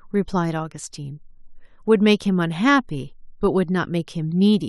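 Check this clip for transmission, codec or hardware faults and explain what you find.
Nothing in this speech recording points to a fault of the kind asked about. No part of it needs an explanation.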